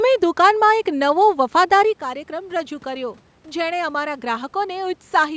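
From 1.32 s to 5.32 s there is automatic gain rising. The input drops by about 11 dB, as the talker moves back around two seconds in, and the gain control slowly adds about 6 dB. Speech and room noise swell together over those four seconds.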